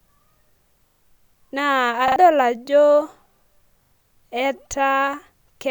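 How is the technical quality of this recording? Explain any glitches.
The speech has three stutters from a repeated buffer, at 0.88, 2.08 and 3.84 s. Audio arrived late, so a short chunk, which fits a 40 ms buffer, replayed with hard joins, briefly dropping roughly a tenth of a second or less each time.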